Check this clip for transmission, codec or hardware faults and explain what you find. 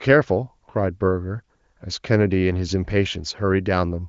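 No transmission, codec or hardware faults turn up anywhere in the speech. What can be heard is the wideband AMR (HD Voice) path at a rate that fits 23.05 kbit/s: the top end stops at about 7.5 kHz, with at most faint coding traces.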